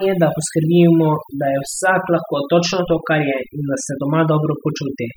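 Throughout the speech, overdone noise removal is audible: a noise reduction stage set far too aggressively has pulled individual frequency bands down or switched them off whenever their level sat near its noise estimate. The background between phrases drops, broken by small twinkling specks where isolated bands briefly survive. Quieter components of the voice were caught by the same gating.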